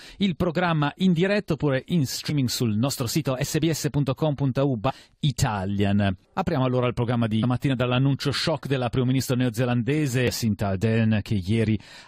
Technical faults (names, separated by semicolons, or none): damaged data in a compressed stream